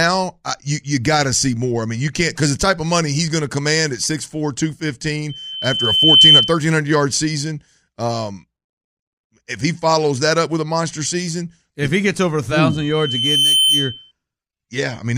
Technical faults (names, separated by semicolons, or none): loudspeaker feedback squeal